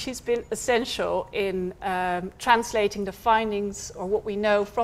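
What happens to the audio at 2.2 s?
Nothing goes wrong at 2.2 s; the audio plays through that moment without any dropout, glitch or other audible fault.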